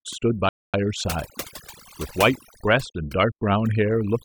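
Overdone noise removal runs through the whole speech clip: a noise reducer set far too hard switches individual frequency bands off whenever they sit near its noise estimate, taking quieter parts of the voice with them. The background is near-silent with twinkling specks; a spectrogram shows a dark floor scattered with isolated bright dots and ragged, hollowed-out gaps in the voice.

From 0.49 to 0.74 s a rebuffering stall drops the sound into silence for about 0.25 s, because the player ran out of downloaded audio and waited for more. It then resumes exactly where it stopped, so nothing is lost but time is added. The waveform shows a flat, silent stretch with clean edges on either side.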